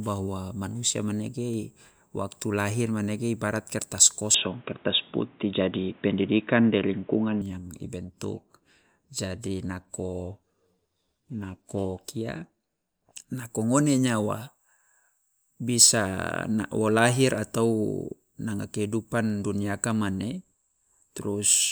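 From 4.34 to 7.42 s, just after "lahir manege ibarat kertas", the speech turns dull and boxy with nothing above 3.8 kHz, likely an input switched to a poorer device.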